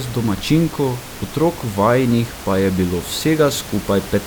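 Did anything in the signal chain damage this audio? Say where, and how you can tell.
No, nothing along the chain has harmed this speech, and the only other thing you can hear is the room's own background noise, sitting about 15 dB under the speech, which belongs to the recording space rather than the equipment.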